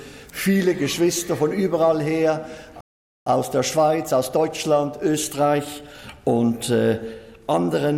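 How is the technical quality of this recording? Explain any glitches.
The recording has two linked playback glitches, a stall followed by a hurried recovery.

From 2.81 to 3.26 s, a playback stall cuts the sound abruptly for about 0.45 s, likely because the player's buffer ran dry. The waveform shows a flat gap, and the spectrogram shows a blank vertical band.

From 3.26 to 6.26 s, time-compressed catch-up plays at 1.1× speed, splicing out small slices at unchanged pitch. The sound is hurried, and the spectrogram shows denser events with unchanged harmonic spacing.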